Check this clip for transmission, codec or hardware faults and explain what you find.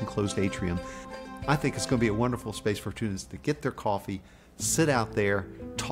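Nothing wrong turns up anywhere in this audio.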